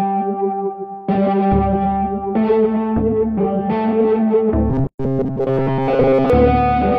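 From 4.70 to 6.30 s the sound goes robotic, a rigid metallic buzz near 134 Hz, likely from repeated short buffers of about 7.5 ms replacing most of the real audio. Inside that stretch, at 4.87 s, there's a gap at a join of encoded pieces: a 124 ms silence with smeared edges, then the sound resumes where it stopped, from untrimmed encoder padding.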